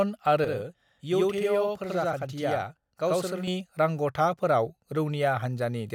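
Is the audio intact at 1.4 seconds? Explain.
No. From 0.44 to 3.47 s a channel delay (doubling) is present. One channel runs about 85 ms late, which fits a 4096-sample buffer, and the mono sum plays the speech twice at equal level. The result is a single distinct slap, not a decaying reverb tail or the hollow colouring of comb filtering.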